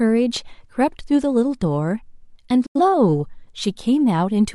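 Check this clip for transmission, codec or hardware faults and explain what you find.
One transmission fault is present. From 2.66 to 2.80 s there is a digital broadcast dropout: the receiver muted after corrupted frames, fading out within 8 ms, which fits two lost frames of speech.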